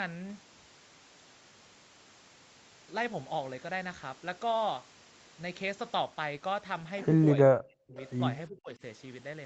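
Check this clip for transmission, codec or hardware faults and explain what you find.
Two kinds of fault occur near the end of the clip, both tied to echo cancellation on a call.

Speech suppressed in double talk: at 7.44–7.98 s and 8.48–8.82 s the speech dips and fragments, by roughly 40 dB and then roughly 25 dB. The likely cause is the canceller attenuating everything while both sides talked at once. On the waveform the envelope collapses, and the spectrogram shows dark gaps.

Echo leak: from 7.96 to 8.11 s a faint copy of earlier speech returns 365 ms late, about 25 dB below the talker. It is likely loudspeaker pickup that the canceller failed to remove. On the spectrogram it appears as a weak repeat of earlier harmonic patterns.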